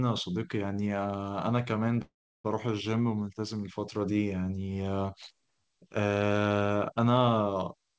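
At 2.02 s the speech stops and a call audio freeze begins, lasting until 2.46 s. The likely cause is packets held up in transit, so the jitter buffer ran dry. The receiver carried the last sound on briefly as a fading buzz or hiss, then about 340 ms of silence. When the audio resumes, it picks up where it left off. Nothing is lost. Everything after the freeze simply arrives about 425 ms later, still band-limited to 8 kHz by the G.722 call codec.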